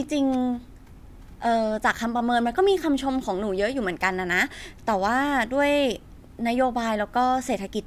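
No technical faults can be heard anywhere in the speech. There is nothing to place on a timeline.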